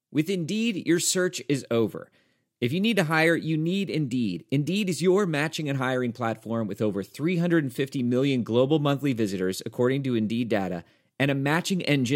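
No technical faults are audible anywhere in the speech recording.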